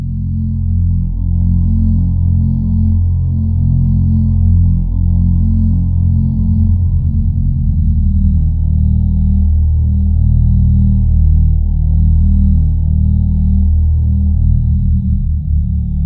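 No technical faults are audible.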